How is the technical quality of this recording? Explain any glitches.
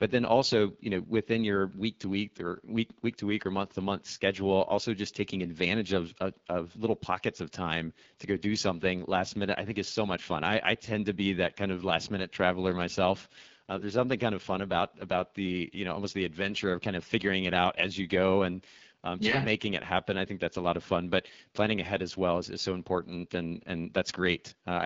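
The recording has plainly audible codec damage throughout. The room noise sits about 51 dB below the speech and is not a fault.

AMR wideband (HD Voice) codec, throughout: the speech was squeezed through a low-rate coder, which fits 8.85 kbit/s, so the speech sounds rough and raspy.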